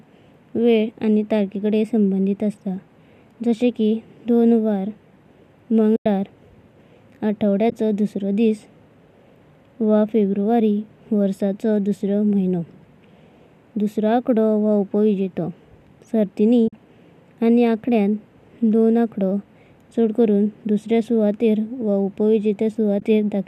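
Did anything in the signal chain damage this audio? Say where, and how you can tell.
Yes. AAC frame loss with muting, at the network-to-decoder stage, leaves soft-edged silent gaps at 5.96–6.06 s, 7.70–7.72 s, 16.68–16.73 s and 23.00–23.02 s. The gaps last 20 to 100 ms, consistent with whole 10 ms frames going missing. The decoder zeroes their spectrum, and the overlapping windows fade the sound out and back in. The faint roughness throughout is likely the low-delay AAC compression itself.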